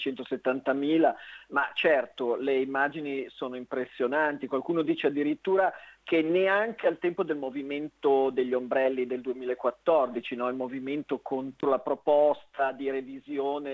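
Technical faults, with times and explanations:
No technical faults heard.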